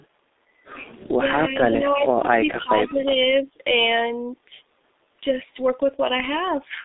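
Throughout, the speech carries heavy G.723.1 codec damage. The band runs only from 250 Hz to 3.7 kHz, so it sounds muffled. The coarse, slow voice model makes it hoarse and smears consonants, which fits a rate near 6.3 kbit/s.

From 1.18 to 1.22 s, the speech briefly dips by roughly 10 dB, for around 40 ms. The likely cause is speech suppressed in double talk. An echo canceller, facing overlapping talk, turned this talker down along with the echo.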